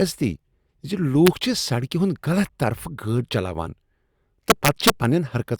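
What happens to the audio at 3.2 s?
Nothing goes wrong at 3.2 s: the speech carries through that moment intact, with no dropout, click, distortion or other audible fault.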